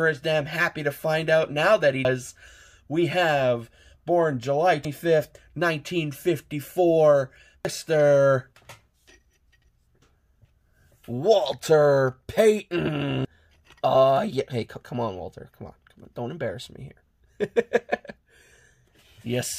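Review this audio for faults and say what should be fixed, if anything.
Audio missing between chunks: skips occur at 2.05, 4.85, 7.65, 10.45, 13.25, 16.05 and 18.85 s, evenly spaced 2.8 s apart. Each one drops roughly a fifth of a second, with the surrounding audio joined directly and no gap. The likely cause is processing in 3-second chunks that loses the tail or head at each handover. To prevent it, double-buffer or overlap the chunks so capture continues while one closes and the next opens.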